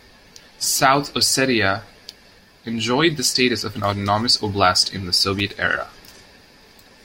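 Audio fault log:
5.39–5.50 s, loose connector crackle: after "autonomous oblast in the", the speech breaks into an irregular scratchy burst as a poor contact rapidly interrupts and restores the signal.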